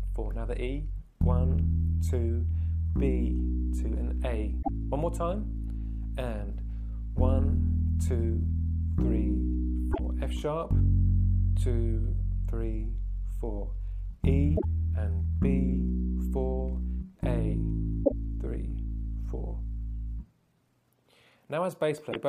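Damaged data in a compressed stream breaks the decoding five times: at 4.59, 9.89, 14.54 and 18.01 s, each lasting about 0.11 s, and at 22.09 s for about 0.07 s. Each time the decoder hits corrupted bytes, misreads the frames there and loses sync until it locks onto the next valid frame header. What comes out is a short, harsh chirp or blip that cuts across the sound.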